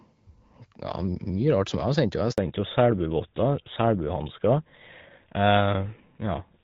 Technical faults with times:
2.32-2.38 handover gap
2.38-6.63 fallback to narrowband

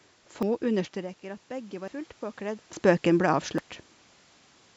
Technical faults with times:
0.43 dropped buffer (overrun)
0.94-2.92 automatic gain rising
1.88 dropped buffer (overrun)
2.73 dropped buffer (overrun)
3.58 dropped buffer (overrun)

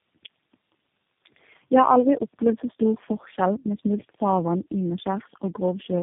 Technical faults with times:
0.00-6.02 tandem speech coding

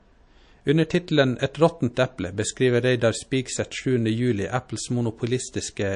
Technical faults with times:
0.00-5.95 MP3 compression
1.94-1.97 pre-echo

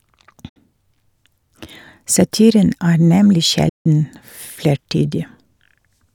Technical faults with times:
0.49-0.57 digital broadcast dropout
3.69-3.86 digital broadcast dropout

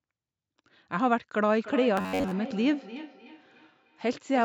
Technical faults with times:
1.58-4.44 feedback echo between two devices
1.97-2.31 robotic sound from repeated short buffers

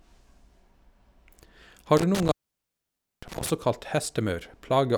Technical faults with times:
1.97-3.50 intermittent contact

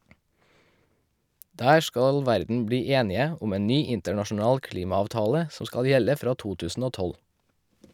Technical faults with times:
none

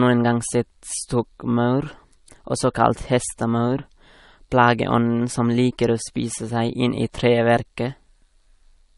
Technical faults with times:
0.00-8.98 transcoding between lossy codecs

